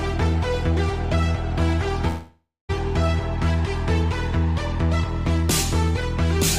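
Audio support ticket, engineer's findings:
Audio breaks up 2.07–2.71 s: the last sound stretches into a fading buzz, decays to about 240 ms of near-silence, then resumes with 0.62 s of material gone. Likely long network dropout. Receiver concealment extended the final sound, and the lost stretch was never recovered.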